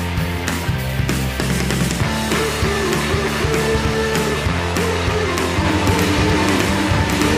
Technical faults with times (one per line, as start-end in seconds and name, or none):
5.64-7.38 doubled audio track